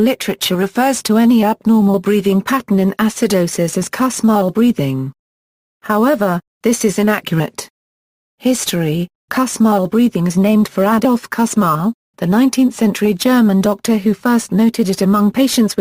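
No technical faults can be heard anywhere in the audio. Nothing in the sound points to a failure in the recording or playback chain.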